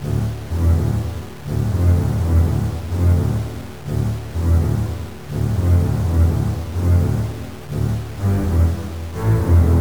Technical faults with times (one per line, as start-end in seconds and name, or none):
0.00-9.80 low bit depth without dither